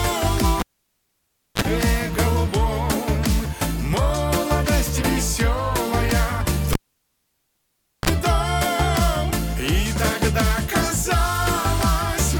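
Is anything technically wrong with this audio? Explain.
Yes, the cable gets pulled and plugged in twice. From 0.60 to 1.62 s there's a pop, then close to a second of near silence (about 0.97 s) while the live lead is out. As the plug goes back in, the tip touches first and picks up 36 ms of 50 Hz mains buzz, then a second pop when the sound returns. The same thing happens from 6.73 to 8.10 s: a 1.32 s dropout with a 42 ms burst of 60 Hz buzz before the final pop.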